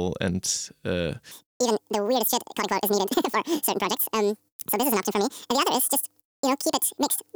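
Speech clip where, from 1.31 s to the end, the playback path has audio read two samples at a time (double speed): the reader treats each pair of samples as a single frame, as if the stream held two channels or samples twice as wide. The sound therefore runs at 2.0 times normal speed and jumps an octave up.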